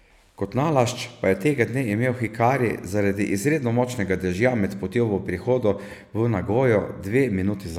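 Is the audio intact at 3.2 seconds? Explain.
Yes, at 3.2 seconds the speech is intact, with no dropout, click, distortion or other fault at that moment.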